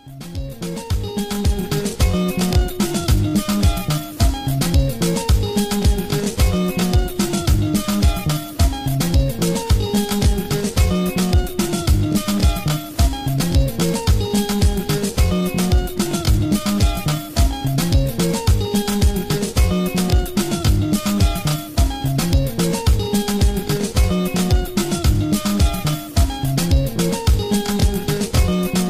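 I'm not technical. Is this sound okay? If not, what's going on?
No. The whole clip, from start to finish, carries a fault called crude rate conversion. The audio was converted to a higher sample rate, which fits a step up by half again, from 32 kHz to 48 kHz, by simply repeating existing samples instead of smoothing between them. That repetition adds a gritty, buzzy fizz with tones that don't belong to the sound, most obvious on loud and bright moments.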